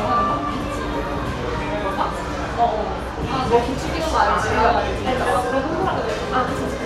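No technical faults can be heard anywhere in this recording of sounds.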